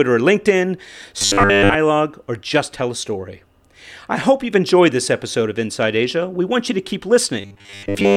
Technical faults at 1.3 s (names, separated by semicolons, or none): robotic sound from repeated short buffers